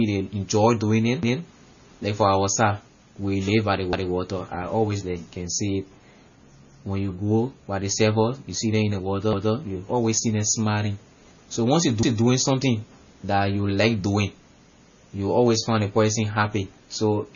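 Speech, likely passed through heavy MP3 compression at a low bitrate, around 24 kbps. Starved of bits, the encoder drops weak frequency lines frame to frame and cuts everything above 7 kHz, so the speech sounds watery and dull, with smeared attacks. Separately, the audio was handled in overlapping chunks of about 2.5 s. Each new chunk began before the previous one ended, so a 200 ms piece plays twice at 1.23, 3.93, 9.33, 12.03 and 14.73 s, heard as a stutter at each join.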